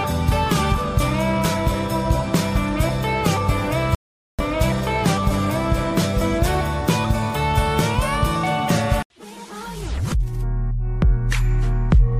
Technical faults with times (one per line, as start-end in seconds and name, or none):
3.95-4.39 audio dropout to silence